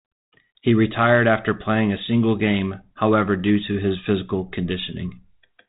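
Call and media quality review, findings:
No faults found; the speech runs over a G.726 link at 32 kbit/s, which can be heard as telephone-band audio with only light coding texture.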